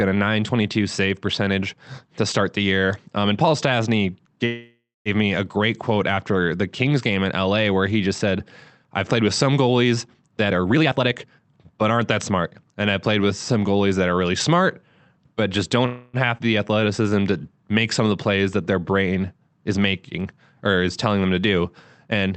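A speech recording carried over an Opus call path, band-limited to about 8 kHz, showing four kinds of timing fault. A call audio freeze runs from 4.45 to 5.09 s: the last sound is stretched into a fading buzz or hiss for about 0.6 s, ending in roughly 0.22 s of silence. A second freeze, after "really smart but just", runs from 15.86 to 16.17 s, filled for about 0.28 s with no silence. Both are likely held-up packets emptying the jitter buffer. Speech resumes exactly where it stopped, which sets these apart from a skip. Jitter buffer speed-up hurries the speech between "played with some goalies" and "and I played with" (10.43 to 12.44 s) to 129% of normal pace, trimming about 0.7 s of pitch periods. It happens again from 22.08 to 22.31 s at 152%, trimming about 0.1 s. Pitch stays unchanged, which distinguishes this from a sped-up recording. A skip ahead at 16.38 to 16.42 s drops around 70 ms and splices the two sides almost directly, so material is genuinely lost rather than compressed. 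Jitter buffer slow-down from 16.67 to 17.11 s, just before "to make some of", repeats pitch periods to add 47 ms and drags the speech to 91% pace without lowering the pitch.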